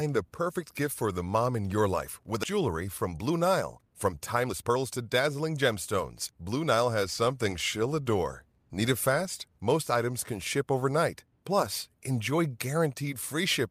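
A skip ahead at 2.43 to 2.45 s, just after "in your life with", drops about a second of speech while later audio was already waiting, so playback jumps forward with nothing filling the gap and the two sides are spliced almost directly.

A jitter buffer speed-up follows at 2.53 to 5.77 s. The receiver, holding too much queued audio, repeatedly trimmed short pitch-period pieces, removing about half a second. Speech runs at 115% speed with unchanged pitch and sounds hurried. A second speed-up at 6.31 to 6.74 s, before "has something she'll adore", runs at 111% and removes a few tens of milliseconds.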